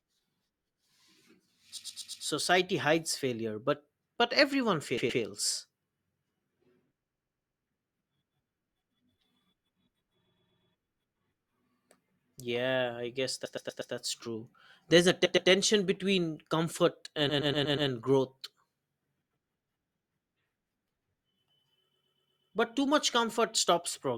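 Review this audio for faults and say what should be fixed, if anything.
Repeated frames: a 120 ms block replays two to five times at 1.77, 4.97, 7.03, 10.25, 13.45, 15.25, 17.29 and 21.93 s, stuttering just before "hides failure but but", right after "failure but but everyone" and after "between comfort". Fix the writer or transport so each frame is sent exactly once.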